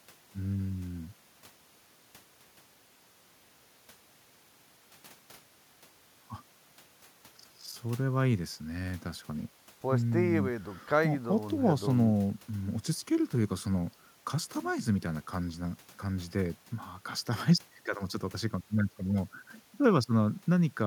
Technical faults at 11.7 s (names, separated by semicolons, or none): none